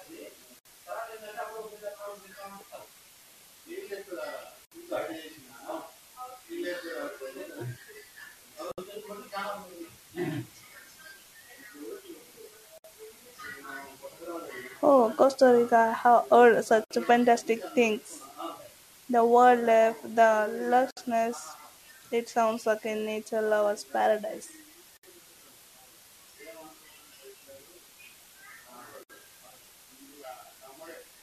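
From the start the speech carries a constant, even hiss about 30 dB below the signal, with no distortion. This is low bit depth with dither, here 8 bits: dither added before rounding turns the coarse quantisation error into steady white noise.

Gaps at a join of encoded pieces open at 0.59, 4.65, 8.72, 12.78, 16.84, 20.91, 24.97 and 29.03 s, every 4.0 s, each about 62 to 64 ms. Separately encoded 4-second pieces were joined untrimmed, leaving encoder delay and final-frame padding as silence with smeared edges.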